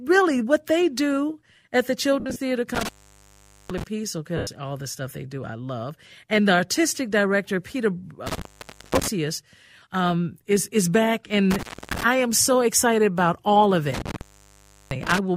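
At 2.20 s the speech hits lost LE Audio frames. About 100 ms of audio goes missing, scattered over 160 ms, with the longest gap around 70 ms, which fits roughly ten 10 ms frames. The LC3 decoder fills each gap by repeating the last spectrum with randomised phase, so the voice smears into a brief noisy texture that fades. The same happens at 4.37 s, again about 100 ms, and at 11.27 s, about 30 ms.

Alongside these, intermittent contact cuts the line open at 2.75 s for about 0.81 s, at 8.27 s for about 0.52 s, at 11.51 s for about 0.29 s, and at 13.94 s for about 0.70 s. A loose plug or cable momentarily breaks the circuit. The speech drops out abruptly with crackle at each break and reconnect, leaving faint hiss while the connection is open.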